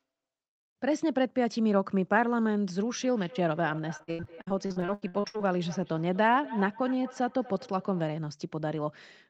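From 2.89 s to 8.11 s, each phrase returns as a thinner, ringing copy roughly a fifth of a second later, peaking at about 18 dB below the speech. This is feedback echo between two devices: a second device in the room replays the call, its sound reaches the first microphone again, and that device's echo canceller cannot remove audio it did not play itself.

Between 3.97 s and 5.42 s the speech turns choppy and robotic, broken by rapid short dropouts up to 78 ms long. This is repeated packet loss: packets kept arriving lost or late, and each hole was patched by extending the previous sound, so about 44% of that stretch is filled-in audio.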